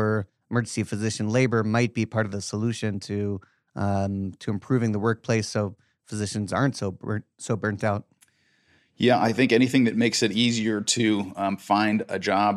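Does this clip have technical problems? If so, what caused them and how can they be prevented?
No, there are no technical problems in this clip.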